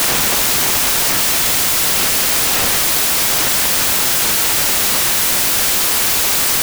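From start to finish the samples are built from the wrong bytes. The reader assembles each value misaligned or byte-swapped. The jittery low bits land in the high positions. The result is loud, harsh broadband noise.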